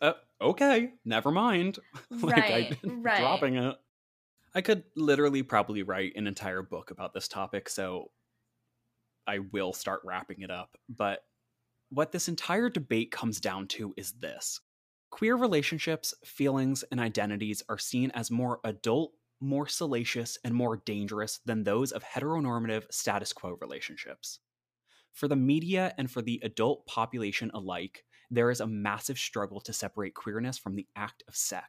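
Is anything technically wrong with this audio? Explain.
No, nothing technically wrong can be heard here.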